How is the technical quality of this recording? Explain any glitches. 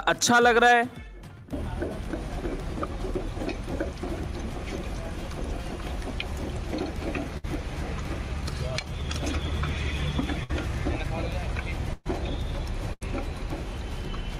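The recording has four short dropouts, all in the second half. Burst of packet loss occurs at 7.37–7.46 s, 10.44–10.51 s, 11.93–12.07 s and 12.93–13.03 s. Consecutive packets went missing, so the receiver stretched the last sound and faded it, bridging roughly 60, 56, 121 and 78 ms. Each gap sounds like a brief held buzz or fading hiss before the audio jumps ahead, with about 60 to 120 ms absent. The 11.93 s gap also includes about 10 ms of silence.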